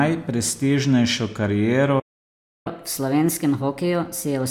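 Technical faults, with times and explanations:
1.99–2.67 s, playback stall: the speech breaks off mid-flow and the output goes silent for about 0.66 s, likely because the player's buffer ran dry or its thread was blocked. The waveform shows a flat gap, and the spectrogram shows a blank vertical band.
2.67–4.51 s, catch-up at higher speed: the speech resumes at 1.25 times normal speed, with its pitch raised by about four semitones, as the player resamples its backlog to win back lost time. The spectrogram shows harmonics shifted upward and spaced wider, and the waveform shows syllables squeezed closer together.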